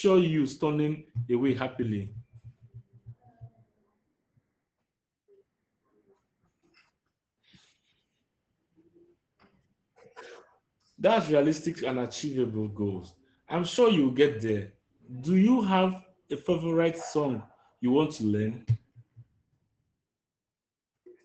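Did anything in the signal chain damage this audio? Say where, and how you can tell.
Yes, Opus voice compression at the codec stage: nothing above 8.6 kHz, and the speech sounds hoarse and slightly robotic throughout, which fits SILK's coarse excitation coding at around 12 kbps.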